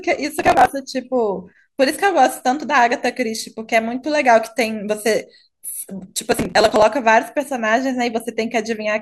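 A speech recording with two bursts of processor overload crackle, from 0.38 to 0.69 s and again from 6.32 to 6.82 s. The processor kept missing its deadlines, so dozens of tiny buffers, around 5 ms each by the sound of it, were simply skipped, leaving a gritty, hard-edged tearing over the audio.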